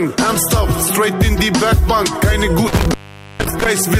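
Intermittent contact occurs between 2.67 and 3.66 s: a loose plug or cable connection breaks and remakes itself, so the sound drops out for about 462.5 ms in total. Each break is framed by a crackle as the contact scrapes, with faint hiss while the line is open.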